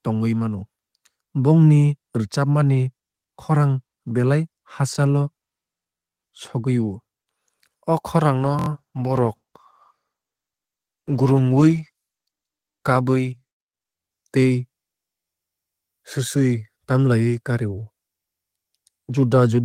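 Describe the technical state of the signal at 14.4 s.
At 14.4 s the call bitrate drop is still in effect, running from 8.47 s to 14.91 s. The encoder was squeezed to far fewer bits, so the speech sounds coarse and muffled, with the high end trimmed. It fits a fall from around 32 to 15 kbps, with the worst stretch lasting about 3.7 s.

Right on top of that, a repeated buffer hits at 14.42 to 14.44 s. Fresh audio didn't arrive in time, so the last 23 ms chunk played twice, which fits a 1024-sample buffer. You hear it as a quick stutter with a hard join.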